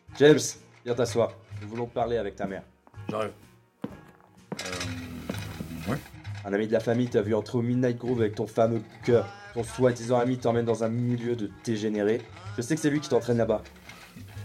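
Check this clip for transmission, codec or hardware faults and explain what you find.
Nothing in the audio points to a problem in how it was captured, encoded or delivered. There is nothing to report at any point in the recording.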